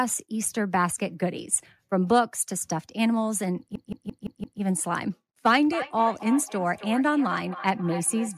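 A system hang loop runs from 3.76 to 4.61 s. The computer or driver stalled while the sound hardware kept replaying the same ring buffer. A 171 ms slice of speech repeats exactly five times at 5.86 Hz, a length that fits an 8192-sample buffer. At that length it sounds like a machine-gun stutter rather than a buzz. When playback resumes, almost nothing appears to be missing.

Feedback echo between two devices begins at 5.65 s and lasts to the end of the clip. Two devices in the same room are on the call, and one plays back what the other's microphone captured. That microphone picks up the playback again. Its echo canceller cannot remove it because the sound came from the other device. Each stretch of speech returns roughly 300 ms later, thinner and ringing, with the echo peaking at about 13 dB below the speech.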